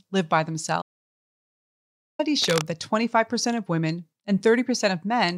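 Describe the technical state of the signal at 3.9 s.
At 3.9 s the speech signal is intact, with no audible fault at that moment.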